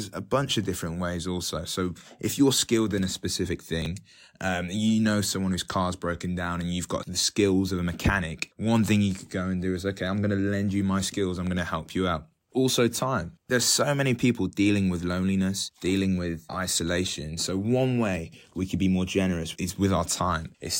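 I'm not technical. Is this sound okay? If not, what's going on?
No, there's a brief chunks out of order glitch at 3.82 to 3.86 s: one tiny 10 ms slice plays three slices late, giving a quick jumbled moment.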